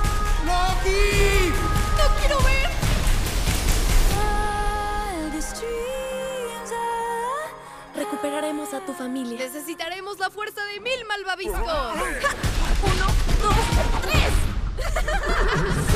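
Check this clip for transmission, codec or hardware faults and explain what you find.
Nothing in the audio points to a transmission, codec or hardware fault.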